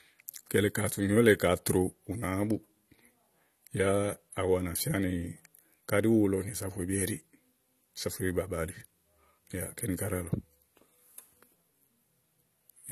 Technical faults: AAC compression

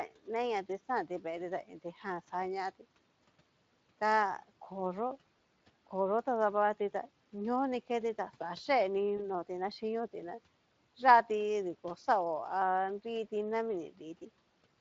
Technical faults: Speex codec; VoIP packet loss concealed by the speech codec

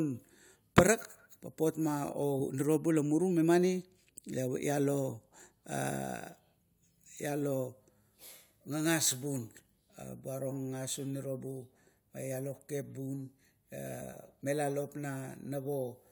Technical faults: none

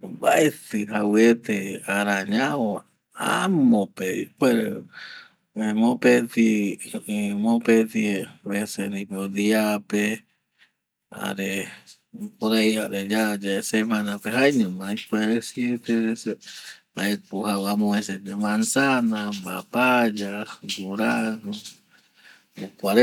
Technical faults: none

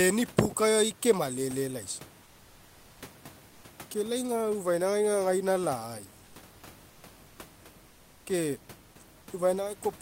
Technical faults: comfort noise in place of the background

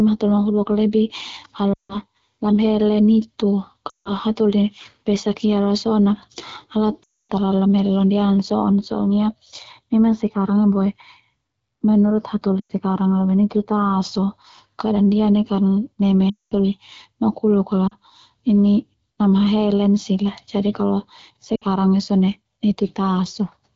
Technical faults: lost AMR speech frames

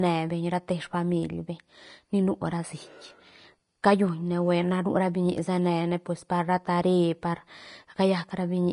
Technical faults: Vorbis compression

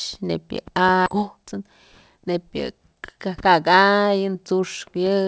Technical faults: skip ahead; jitter buffer speed-up

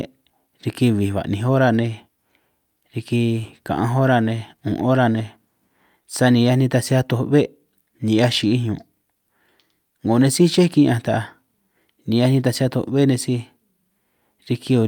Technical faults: none

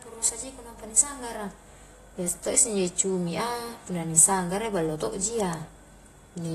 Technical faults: AAC compression

